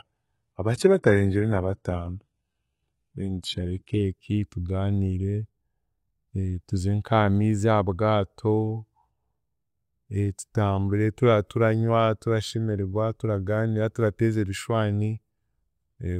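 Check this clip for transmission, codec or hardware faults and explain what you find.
One fault is present, an adaptive stream starting at a low bitrate. From 0.0 to 4.0 s the speech has dull, synthetic treble and stronger codec artefacts, which fits HE-AAC at 16 kbit/s. It then improves abruptly, with no gap, which fits a switch to AAC-LC at 96 kbit/s once the connection was measured.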